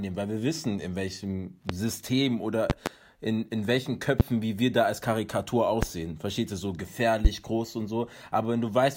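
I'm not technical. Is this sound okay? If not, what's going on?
No. There are loud pops: sharp clicks or thumps that land on top of the speech while it carries on underneath. They come at 1.7 s after "wir wissen in welchem", as a double pop from 2.7 to 2.9 s before "in in welchen", at 4.2 s before "wie wir da als", and at 5.8 s. These are likely electrical jolts, from something like a plug, a switch or static.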